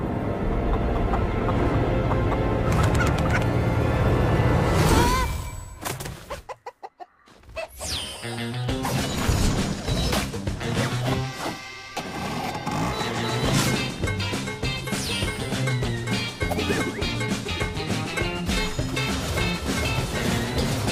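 Sample clock jitter runs through the whole clip. The converter's clock wobbles by a few microseconds, so samples land early or late. Steep, loud passages pick up a grainy hiss, roughly 35 dB below the signal. Quiet moments stay clean.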